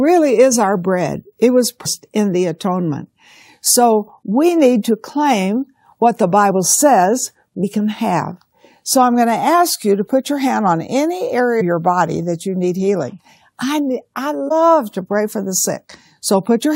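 Damaged data in the compressed stream knocks the decoder out of frame sync at 1.85, 7.63, 11.60 and 14.48 to 14.52 s, each heard as a brief chirp, squawk, click or short hole.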